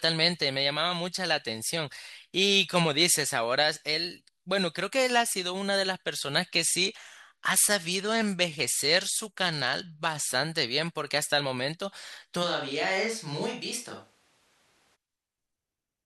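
At 6.64 s the treble suddenly goes dull and a gritty, grainy noise creeps in under the speech, lasting until 10.28 s when the detail snaps back. That's a Bluetooth SBC bit pool drop. The link got congested, so the encoder cut its bit budget, and the sound points to the bit pool falling from 28 to 13, roughly 102 kbps. At that budget the top sub-bands get starved and everything else is quantised coarsely, which is where the grit comes from.

Then from 12.45 s to 14.94 s the speech abruptly turns roomy and hollow, drops about 5 dB in level, thins out in the bass, and picks up a room noise floor roughly 35 dB below the speech. It changes in an instant and changes back just as cleanly, which is the signature of a switch to a distant microphone. Most likely the close mic's feed dropped out and a farther mic, camera-style, covered that stretch.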